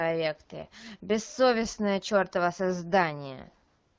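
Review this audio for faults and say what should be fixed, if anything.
AMR comfort noise takes over from 3.67 s to the end of the clip at 3.99 s, about 0.33 s. The phone's voice activity detection judged the talker silent and stopped sending speech frames. The receiver then filled the gap with synthetic noise built from a coarse estimate of the background's level and spectrum, so the real room sound is replaced by a steady, smooth hiss. To prevent it, disable discontinuous transmission on the sending handset or network leg, or relax its voice activity detection.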